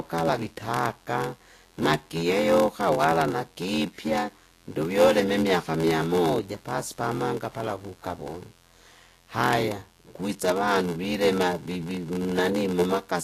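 From start to finish a steady, raspy buzz sits about 35 dB below the speech: mains buzz, where switching spikes at twice the 50 Hz mains rate leak in with harmonics reaching kilohertz. Throughout, a second buzz at 86.1 Hz runs under the speech, which plays at 0.861 times normal speed with its timbre unchanged. This is a padded block size mismatch, where each short block is zero-filled to a length that fits a 512-sample read. The whole clip also sounds hissy and grainy, with roughened tones, smeared attacks, and nothing above 14.2 kHz, most likely from Vorbis compression at a bitrate near 38 kbps.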